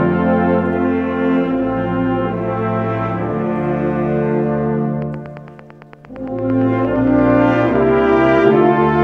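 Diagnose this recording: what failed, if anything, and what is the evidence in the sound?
From 5.02 s to 9.02 s a steady ticking rides over the sound, roughly forty near-identical clicks at a regular 8.78 per second, each peaking at roughly the level of the program itself and audible in the gaps too. This train of clicks most likely comes from the analogue wiring stage: a periodic pulse from nearby equipment coupling into the line, its even spacing reflecting the interfering source's own repetition rate rather than anything in the sound.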